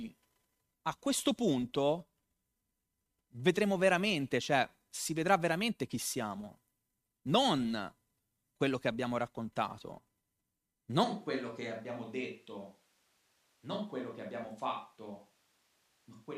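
Switch to a distant microphone at 11.05 s, lasting to the end: the speech abruptly turns roomy and hollow, loses bass, drops roughly 5 dB, and gains background noise near 35 dB below it, likely because the close microphone failed and a farther one took over.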